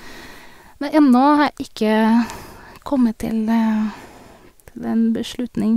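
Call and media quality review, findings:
No audible faults found.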